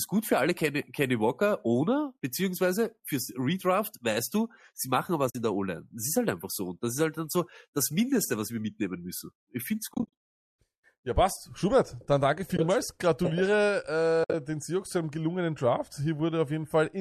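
AAC frame loss with muting: the decoder zeroes lost frames and the overlapping windows fade the sound out and back in. This leaves soft-edged holes rather than hard dropouts. They occur at 5.30–5.35 s after "weißt du sie machen", scattered across 9.92–10.13 s, at 12.57–12.59 s after "dann danke", and mostly as one run across 14.24–14.34 s.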